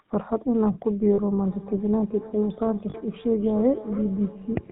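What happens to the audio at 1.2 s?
A brief rough, metallic ring takes the place of the speech just before 1.2 s, from 1.14 to 1.20 s. These are lost GSM frames: the decoder received no usable data for about 40 ms, which fits two 20 ms frames. It filled the gap by reusing the parameters of the last good frame. That frozen excitation gives the short, ringing, synthetic tone. Because the gap is so brief, speech resumes before the ring can fade to silence.

Around that moment, as in the rest of the clip, the GSM full-rate codec at 13 kbps is plainly audible. It models the vocal tract and drives it with a pulse train that keeps only every third excitation sample, so the speech has a buzzy, gravelly grain. Nothing above 4 kHz passes, which leaves the sound dull and narrow.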